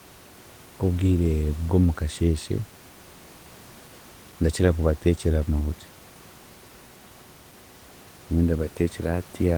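No technical faults occur at any point in the speech; the only thing under it is the room's own background noise, about 28 dB below the voice.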